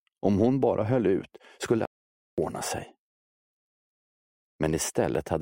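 At 1.85 s a playback stall stops the sound for about 0.52 s, likely from the player running short of data; the silence is far longer than a click-like dropout.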